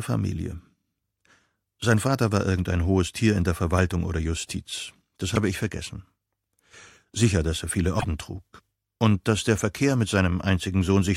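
A broken MP3 bit reservoir is the likely cause of two disturbances, at 5.34 to 5.37 s and 7.98 to 8.05 s. After frames went missing, the following frames looked back for borrowed data and decoded bytes from a different frame. At each point the sound jumps ahead, and the span after the cut turns into a chirp, a noise burst or a brief gap. The first span lasts about one 26.1 ms frame, the second about two and a half.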